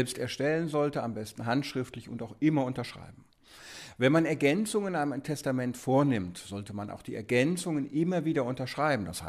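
No technical faults can be heard anywhere in the audio.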